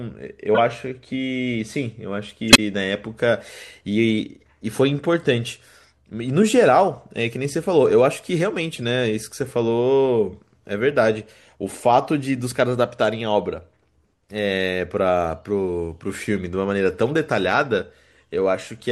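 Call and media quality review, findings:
Corrupt frame decoded at 0.54–0.60 s, 2.49–2.59 s and 8.73–8.84 s: short chirps and noise bursts in the speech. Decoder played damaged frames; misread gains put energy at wrong frequencies. Peaks near full scale, quietest about −20 dBFS.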